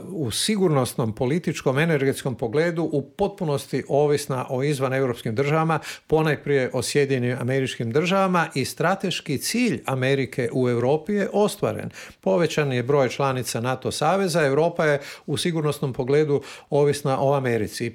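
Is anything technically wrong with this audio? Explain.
No, there's nothing technically wrong with this audio. No fault can be heard anywhere in the clip.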